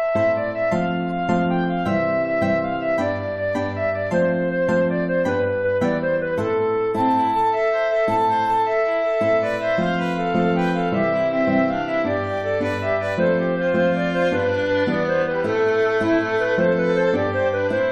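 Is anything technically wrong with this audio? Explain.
No, nothing technically wrong can be heard here.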